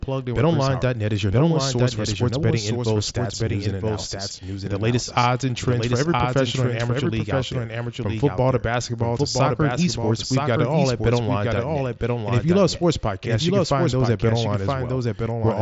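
From start to finish the speech is heard twice. A second, full-band copy trails the original by about one second. It sits roughly 5 dB below the first. This is a doubled audio track. The copy carries no reverb or room colour, so it reads as a distinct repeat rather than an echo. The likely cause is the same signal being captured again through a slower path. Both copies share the headset band, ending near 7.7 kHz.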